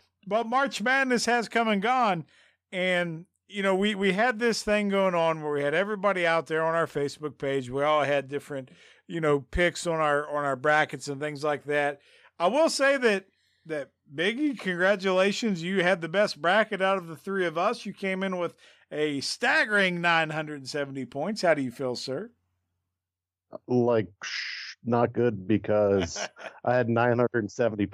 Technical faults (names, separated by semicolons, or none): none